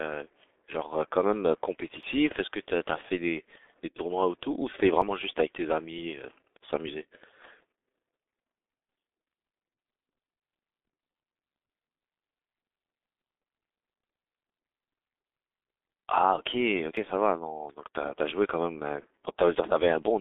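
The speech in this clip has been through the G.723.1 codec at 6.3 kbit/s, and the damage is heavy. Nothing reaches above 3.8 kHz, and the band sits roughly between 250 Hz and 3.6 kHz, so the voice is muffled. Unlike a simple telephone band-limit, the sound is also hoarse and rough, with smeared consonants, because the codec rebuilds each 30 ms frame from a coarse voice model that can't follow fast changes. Three abrupt skips break the flow at 2.03, 5.02 and 16.97 s. Each removes about 10 ms of audio and butts the two sides together without any gap. That seamless join is what separates these from packet-loss dropouts, which would leave silence or a smeared fill. The spacing falls on multiples of 3 s, so the likely cause is audio missing between chunks as a recorder or processor hands over from one 3 s block to the next.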